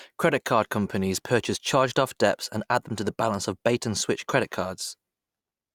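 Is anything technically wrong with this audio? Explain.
No, nothing is technically wrong.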